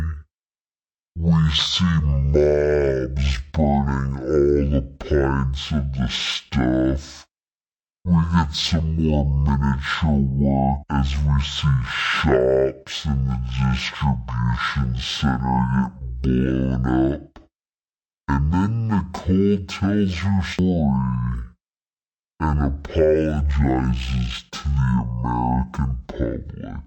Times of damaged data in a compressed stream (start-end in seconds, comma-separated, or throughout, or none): none